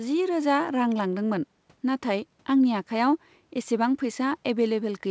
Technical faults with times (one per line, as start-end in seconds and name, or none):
none